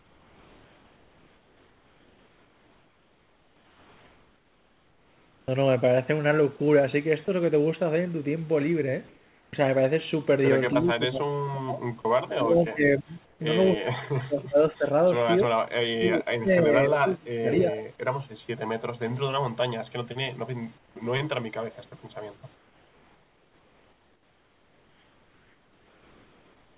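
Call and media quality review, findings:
Sound chopped by the voice detector, 0.00–6.64 s. Sender VAD likely toggling send/stop repeatedly. About 5.5 s of the stretch is replaced by comfort noise. Quiet syllables and word edges drop out, giving choppy speech with a background flickering between real and synthetic.

Sound dropped by the voice detector, 7.25–7.28 s. Sender VAD likely misjudged a quiet moment as background and paused sending. 30 ms of speech is lost and filled with steady comfort noise before the audio resumes.

Comfort noise in place of the background, at 9.08–9.53 s, 13.25–13.40 s, 20.78–20.96 s and 22.55–26.78 s. Discontinuous transmission likely active during pauses, with the receiver synthesising noise. The real background, about 35 dB below the loud passages, becomes flat, featureless hiss. It drops by about 3, 4, 6 and 5 dB respectively. The last span runs to the end.

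Speech suppressed in double talk, at 10.74–11.83 s, 12.30–13.14 s, 13.74–14.87 s and 15.99–17.86 s. The echo canceller likely could not separate the near talker from the far-end echo and attenuated both. The voice dips by up to around 25–30 dB, for roughly a second at a time, up to 1.5 s in the last span, and thins or breaks up in pieces.

Echo leak, 17.59–17.63 s. Residual loudspeaker pickup likely escaped the echo canceller and was sent back. A brief scrap of delayed voice is audible 278 ms after the original, about 15 dB below the speech. It lands right at the tail of the last suppression span.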